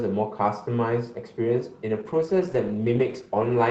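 From 1.9 s to the end, a call bitrate drop leaves the speech coarse and muffled, consistent with Opus falling from 32 to 13 kbps.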